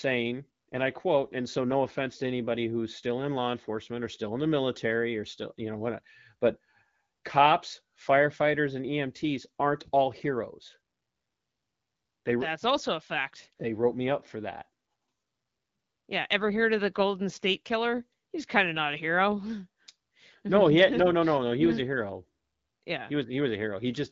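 No technical faults are audible in this speech, which passes through the AMR wideband (HD Voice) codec at 12.65 kbit/s, with its audio band extending to about 7 kHz.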